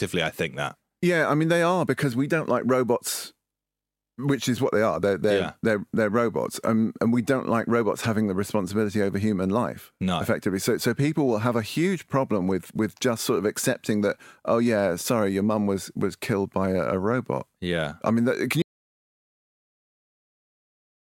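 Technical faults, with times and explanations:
18.62 s to the end, audio dropout to silence: the input feed was likely lost, through a disconnected device or failed link, while recording continued writing silence. The speech cuts off abruptly and the final 2.4 s are silent, without room tone.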